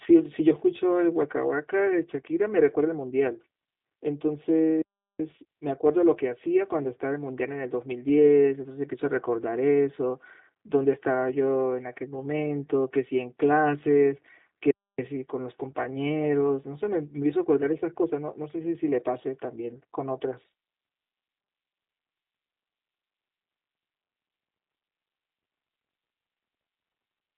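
From start to finish the speech sounds hollow and phasey, as if heard down a tube, with a dull, scooped quality that never shifts. That is channel delay (comb filtering): one channel arrives roughly 3 ms behind the other, and when the two are summed to mono the shared content cancels at regularly spaced frequencies. The first notch sits somewhere around 200 Hz, with further fixed notches repeating evenly up the spectrum.

Over the whole clip the speech is also squeezed into a narrow telephone band and carries a plainly audible rough, slightly synthetic edge. Everything lies between about 150 Hz and 3.7 kHz, with nothing above 3.8 kHz, so sibilants lose their crispness. The band limit and the rebuilt, buzzy texture point to the G.729 codec at 8 kbit/s. It models speech as a vocal tract filter and a pitch predictor plus a few pulses per frame, rather than carrying the actual waveform.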